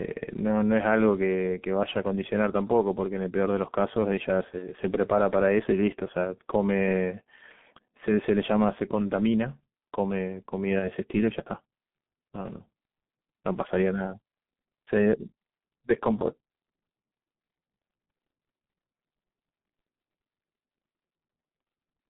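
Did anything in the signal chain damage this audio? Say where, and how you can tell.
Yes. At the codec stage, the whole clip has been through G.723.1 at about 6.3 kbit/s. Speech is muffled and hoarse with smeared consonants. On a spectrogram, energy sits between roughly 150 Hz and 3.6 kHz with a sharp ceiling, and harmonic detail looks blocky in 30 ms steps.

At the network stage, there is VoIP packet loss concealed by the speech codec at 4.59 to 4.66 s and 10.79 to 10.90 s. Each gap fits a single lost 30 ms frame. The decoder repeats its last pitch and filter, so the spectrogram shows frozen harmonics fading out and the waveform envelope sagging before it recovers.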